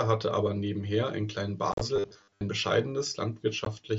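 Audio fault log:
1.72–1.81 s: unconcealed Bluetooth headset packet loss. About 67.5 ms of audio drops out in scattered gaps over 90 ms, the longest lasting 37.5 ms. Nothing fills the missing headset packets, so the sound is chopped by hard-edged holes.
1.96–2.42 s: robotic sound from repeated short buffers. A rigid 100 Hz metallic buzz is imposed on the speech. This is likely caused by a roughly 10 ms buffer being replayed while most of the new audio is skipped.
3.65–3.67 s: unconcealed Bluetooth headset packet loss. Two lost packets remove 15 ms of audio, leaving a brief hole with sharp edges.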